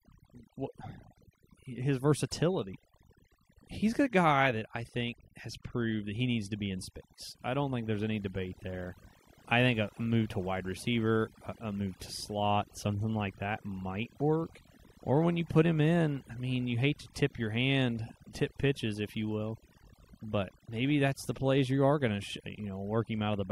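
From start to finish the speech carries overdone noise removal. A noise reduction stage was set far too aggressively, so any frequency band near its noise estimate is cut or muted, taking softer parts of the voice along with the noise. The background drops to near silence speckled with twinkling artefacts. A spectrogram shows scattered isolated dots in the gaps and ragged, hollowed-out speech harmonics.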